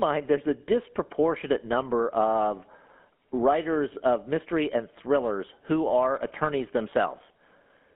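Throughout the speech, GSM full-rate codec damage is plain. The band sits at 200 Hz to 3.4 kHz, pulse-driven modelling adds buzzy roughness, and the sound fits 13 kbps.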